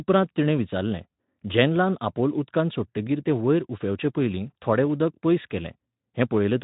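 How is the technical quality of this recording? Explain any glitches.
The technical quality of this recording holds up, with no glitches to explain.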